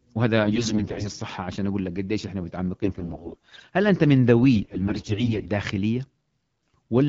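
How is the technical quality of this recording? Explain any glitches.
The recording has a recurring fault: AMR bit errors at 0.44–1.12 s, 2.83–3.63 s, 4.56–5.49 s and 6.75 s. On a weak link, unprotected AMR bits were flipped, roughly 15% in the first and third bursts, 20% in the second and 7% in the last, while the checksum still passed. This misplaced excitation pulses and skewed the pitch, gain and spectral values, so the speech keeps its pitch and level but turns hoarse, scratchy and gargly in those stretches. The underlying AMR wideband (HD Voice) coding sounds clear, which fits a 12.65 kbit/s mode.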